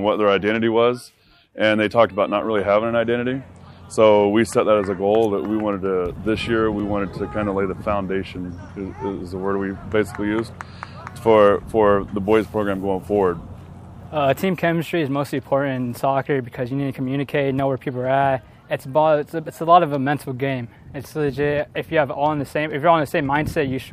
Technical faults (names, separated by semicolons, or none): block of digital silence